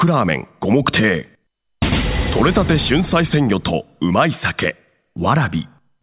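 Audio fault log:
No faults detected; nothing to log for this clip.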